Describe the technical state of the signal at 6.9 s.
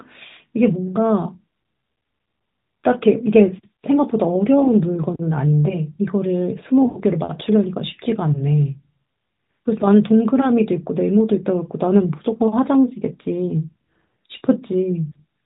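Lost AMR speech frames from 6.86 to 6.99 s: the decoder stretches the last good pitch and vocal-tract settings with falling gain, so the sound smears and fades. On a spectrogram, frozen harmonics below the 4 kHz narrowband ceiling dim steadily.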